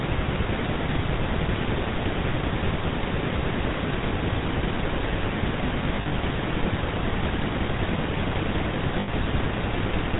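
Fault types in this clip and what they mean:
GSM full-rate codec: The whole clip has that buzzy, gravelly GSM edge. The coder rebuilds speech from a vocal-tract model fed by a coarse pulse excitation, and nothing above 4 kHz survives. The damage is plainly audible, consistent with 13 kbps full rate.
Lost GSM frames: From 5.96 to 6.13 s, about 100 ms drops out in short gaps spread over 160 ms, and from 9.0 to 9.09 s an 80 ms run goes. The decoder repeats the last good frame while fading it, so each gap comes out as a brief metallic ring.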